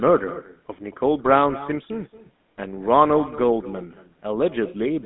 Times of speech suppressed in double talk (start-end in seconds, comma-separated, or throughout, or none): none